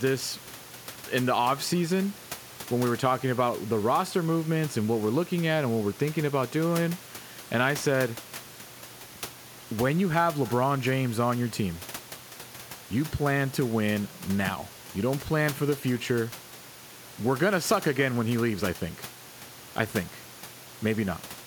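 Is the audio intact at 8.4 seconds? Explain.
Yes, the audio is intact at 8.4 seconds, with no fault at that moment in the speech.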